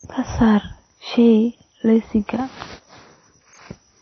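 From start to finish the speech sounds dull and smeared, with nothing above 6 kHz and a watery, warbling edge on sibilants and held sounds. That's likely AAC compression, an AAC-LC encode starving the upper bands, which fits a low bitrate around 24 kbps.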